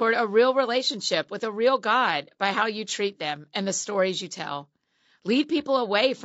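From start to finish the speech sounds rough and grainy, the likely result of low-delay AAC compression of the AAC-ELD kind at a bitrate that fits about 32 kbps. Its short frames blur pitch harmonics. A spectrogram shows smeared harmonics, noise filling the gaps between them, and a thin, patchy top band.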